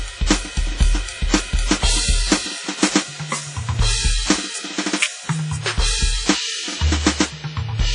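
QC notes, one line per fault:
Throughout, WMA compression: the music sounds washy and ringing, with a hiss that breathes with the signal and nothing above 10.3 kHz. The likely cause is a transform codec smearing quantisation noise across long blocks and zeroing weak lines, heavy damage consistent with about 24 kbps.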